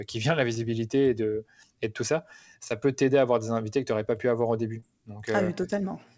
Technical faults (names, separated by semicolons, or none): short concealed packet loss